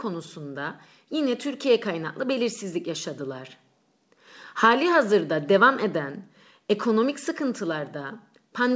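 No technical faults can be heard in the speech, which carries nothing above 8 kHz, a band limit consistent with a wideband G.722 call codec running at 64 kbps.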